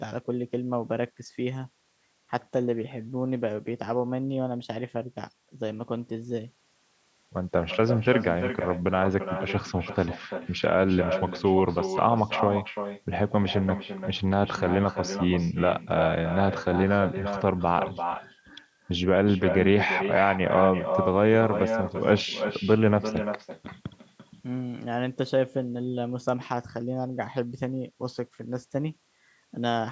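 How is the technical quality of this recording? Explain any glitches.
The recording has one clear problem that runs from start to finish: an echo with no canceller. Every phrase of speech comes back about a third of a second later as a copy roughly 8 dB quieter. The far end is almost certainly playing the call through a loudspeaker, and its microphone sends that sound back down the line with nothing to cancel it. The returned copy sounds thinner than the direct speech. On a waveform, each burst of speech has a smaller, smeared twin trailing behind it. On a spectrogram, the harmonic patterns repeat at a lower level, shifted right by about 300 ms. The call's microphone processing also limits the band, so nothing appears above 8 kHz.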